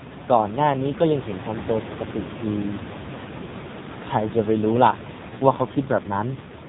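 Speech through AMR narrowband mobile codec from start to finish: the voice sounds buzzy and synthetic, fitting heavy damage at roughly 5.9 kbps, and room noise about 10 dB below the speech swirls. A spectrogram shows nothing above 4 kHz.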